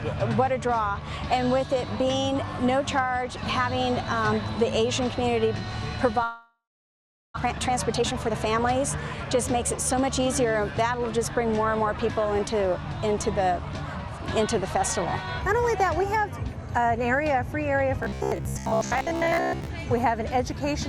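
At 6.23 s the sound breaks off for about 1.15 s, until 7.38 s. This is a long network dropout, likely from packets that stopped arriving. The last sound is stretched into a fading buzz. Then about 0.73 s of near silence follows. Roughly 0.6 s of real audio is never heard. The sound resumes further on, with the gap simply skipped. The delay has grown by around half a second.

Right after, from 7.44 to 8.76 s, a jitter buffer speed-up follows. The receiver holds too much queued audio and trims it. It cuts many tiny pieces, each a pitch period or so long. Playback runs at 129 percent speed with unchanged pitch. It sounds hurried. Roughly 0.4 s is removed. A gentler pass runs from 9.35 to 11.18 s at 105 percent. It removes around 0.1 s and is harder to notice.

From 18.03 to 19.70 s the sound turns rigid and metallic. This is robotic sound from repeated short buffers. Fresh audio arrives too seldom. 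The last short chunk is replayed to fill the time, and the real audio in between is lost. Most of this stretch is repeats. The buzz sits at 66.7 Hz, which points to a 15 ms buffer. The likely cause is starved input. The rough shape of the sound still comes through.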